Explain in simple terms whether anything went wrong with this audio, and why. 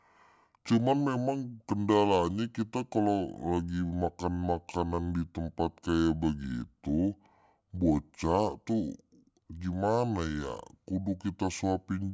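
The audio was played back at a slower rate than it was recorded at, a wrong sample rate fault, with no conversion in between. For the whole clip, the speech runs at two-thirds speed and sounds about seven semitones lower, which fits 24 kHz audio played at 16 kHz.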